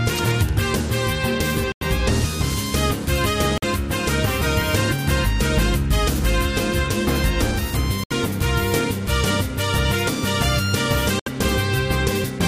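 Corrupt frame muted at 1.72–1.83 s, 3.58–3.64 s, 8.04–8.12 s and 11.19–11.28 s: damaged compressed frames were rejected and replaced with silence. Each is an abrupt dropout with timing kept, and shows as a flat waveform and a blank vertical band on a spectrogram.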